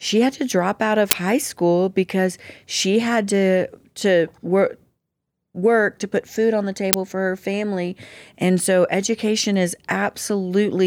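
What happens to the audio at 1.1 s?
An uninitialised buffer was sent to the output before any audio had been written into it, so stale memory contents were played as samples from 1.11 to 1.13 s, a block of about 20 ms. Between "to drop out of" and "high school because she", this is heard as a short, loud crack.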